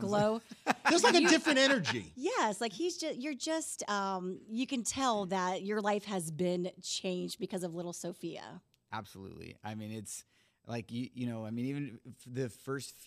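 There are no technical faults to describe at any point in the audio.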